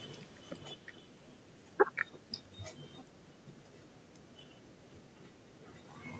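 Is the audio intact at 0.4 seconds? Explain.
No. At 0.4 s the speech is partway through a gradual sink in level, with the background fading down together with it. This is automatic gain falling, from 0.05 to 1.04 s: the gain control judged the input too loud or its background noise too strong and eased its gain down by about 5 dB.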